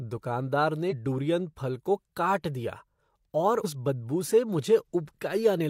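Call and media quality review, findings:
Compressed frames skipped at 0.88 s and 3.61 s. The speech jumps ahead about 150 ms each time. That fits roughly three dropped 42.7 ms frames, either missing or rejected by the decoder.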